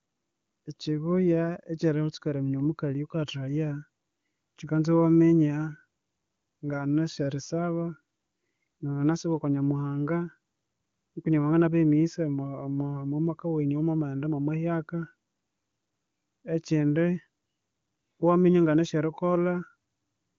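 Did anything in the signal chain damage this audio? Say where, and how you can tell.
No, the speech shows no damage from any stage of the chain; it has passed through the AMR wideband (HD Voice) codec at a rate consistent with 23.85 kbit/s, whose coding leaves at most a faint trace here and stops the spectrum at about 7.2 kHz as that codec is designed to do.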